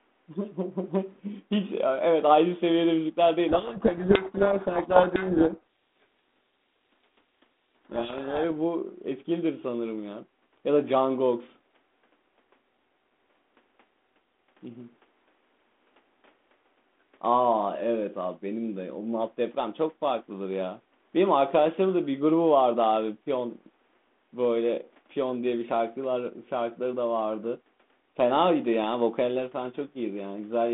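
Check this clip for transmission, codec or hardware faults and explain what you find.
Yes, there's one clear fault. From 3.49 to 8.45 s there's a codec payload misread: the G.726 code words arrive with their bit order flipped, so the decoder rebuilds the wrong differences and the speech gets buried in harsh distortion.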